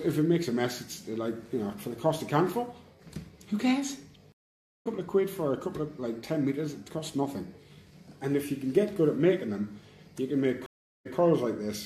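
At 4.32 s a stream reconnect cuts the sound for 0.54 s. It resumes about 0.4 s later. At 10.66 s another gap of 0.39 s resumes 0.12 s earlier, repeating material.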